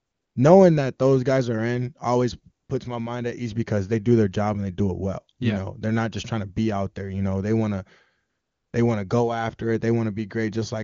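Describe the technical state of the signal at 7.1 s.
At 7.1 s the speech comes through intact, carried by the AMR wideband (HD Voice) codec at 23.85 kbit/s, at which any coding damage is faint at most.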